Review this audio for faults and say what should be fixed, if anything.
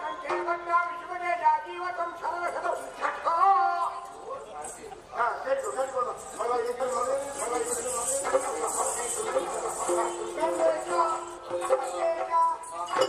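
From 6.80 s to 11.38 s, a second full-band copy of the sound trails the original by about one second, roughly 5 dB quieter. It is dry, with no decay or room colour, and it cuts in and out abruptly. This doubled audio track likely comes from the signal being captured twice, once through a slower parallel path, or from an edit that left two offset copies stacked. To prevent it, route each source through a single capture path and check edits for overlapping duplicate regions.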